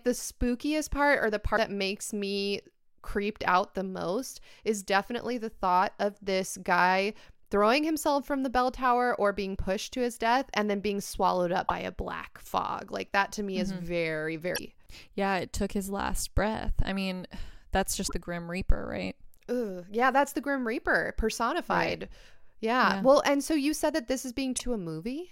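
Damaged data in a compressed stream causes brief blips at 1.53–1.58, 11.64–11.71, 14.54–14.59, 18.04–18.12 and 24.54–24.61 s, where corrupted frames are misdecoded and the decoder resynchronises.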